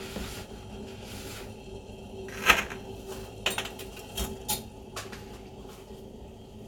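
No technical faults can be heard in this sound at any point.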